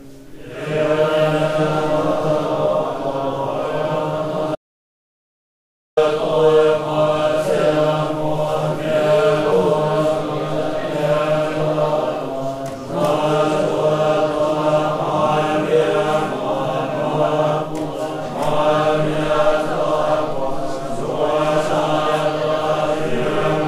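At 4.55 s the sound drops out to silence and returns at 5.97 s, an audio dropout to silence lasting about 1.42 s. The input was likely lost for that stretch, while writing carried on with silence. What separates it from a natural pause or a noise gate closing is the abrupt cut at both edges and the total absence of room tone inside the gap; whatever sound occurred during those 1.42 s is simply gone.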